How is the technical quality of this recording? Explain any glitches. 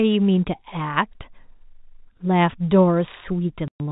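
The recording carries one glitch near the end, over telephone-band speech whose G.711 coding stops everything above 4 kHz. From 3.68 to 3.80 s there is packet loss filled with silence: about 120 ms of audio vanishes, which fits six 20 ms packets dropped in transit. The receiver substituted silence, so the speech cuts out abruptly, seen as a flat silent gap in the waveform and a blank vertical band on the spectrogram.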